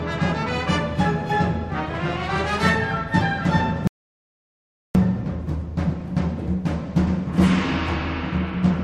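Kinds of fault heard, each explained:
rebuffering stall: The player drained its store of downloaded audio faster than new data arrived, so playback halted until enough had come in to continue. In the sound this is a sudden drop to silence at 3.87 s that holds until 4.95 s, after which the audio picks up at exactly the point where it broke off. Nothing is skipped or repeated, but the pause stretches the clip by about 1.08 s.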